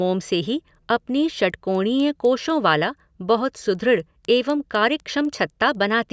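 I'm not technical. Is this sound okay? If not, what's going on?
No. Faint ticks run through the whole speech, four per second. The resampler restarted on every block, leaving a small glitch at each quarter-second seam.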